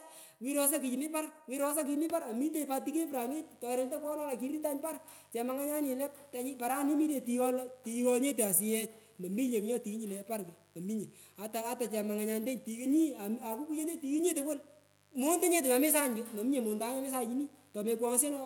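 From 3.1 s to the end, a steady, raspy mains buzz sits under the speech, well below it in level. Sharp switching spikes from the 50 Hz supply leak in twice per cycle. Their harmonics stack up into the kilohertz range, giving the buzz its gritty edge.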